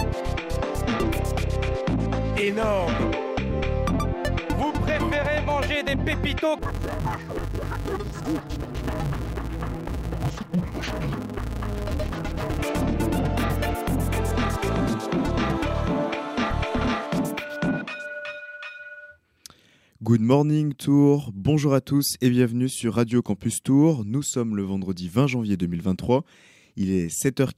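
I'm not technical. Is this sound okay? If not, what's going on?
No. From 6.59 to 12.59 s, interleaved audio was read as planar, with left-right pairs split wrongly in tiny 5.33 ms chunks, so the sound turns dull and robotic with a 188 Hz buzz.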